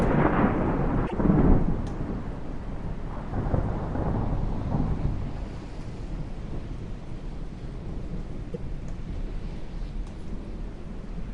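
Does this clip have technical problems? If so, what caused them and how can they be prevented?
Yes. Damaged data in the compressed stream causes short glitches at 1.03–1.13 s and 8.54–8.56 s, where corrupted bytes made the decoder misread frames and resynchronise on the next valid header. Verify file integrity with checksums and use error-protected transport.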